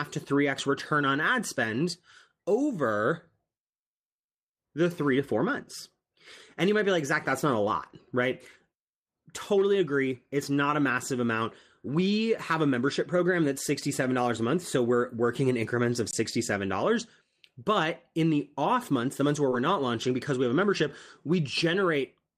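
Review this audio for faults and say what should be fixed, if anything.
Lost packet rebuilt from error correction occurs at 7.81–7.95 s, 13.17–13.19 s and 19.51–19.53 s. Packets went missing, but the redundant low-bitrate copy carried in the following packet was decoded in their place, so the speech never drops out. Those stretches sound coarser and grainier. The first is 80 ms long, which fits four separate 20 ms packets. The other two are 20 ms each. To prevent it, reduce packet loss on the network path, for example with a more stable link or prioritised voice traffic.

Underrun with held sample occurs at 16.11–16.13 s. The playback buffer ran dry for 20 ms and the output froze at its last value, leaving a flat stretch in the waveform. Nothing appears to have been skipped, since playback picks up where it stopped, so the restart is soft rather than a sharp click. To prevent it, increase the output buffer size or make sure the audio thread is scheduled reliably enough to keep the buffer filled.

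Short concealed packet loss occurs at 19.49–19.53 s. About 20 ms of the call arrived too late to be decoded. The receiver extrapolated the preceding sound to fill roughly 16 ms of that gap, then crossfaded back into real audio. The result is a brief smear or wobble. Its tail overlaps the error-corrected frame at 19.51 s. To prevent it, use a larger or adaptive jitter buffer so that late packets still arrive in time to be played.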